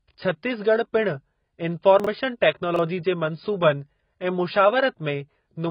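Throughout the speech, nothing is heard above 5 kHz, with dull, smeared, warbling sibilants, likely from heavy AAC compression at a low rate near 16 kbps. From 2.00 to 2.07 s and from 2.74 to 2.79 s, chunks out of order play late, by two and one 23 ms blocks, causing brief jumbled moments.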